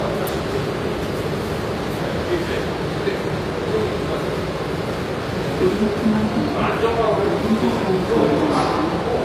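Low-bitrate audio saved at a high bitrate affects these sounds throughout: nothing reaches above 14.9 kHz, likely left by an earlier low-bitrate encode that the later high-bitrate MP3 cannot restore.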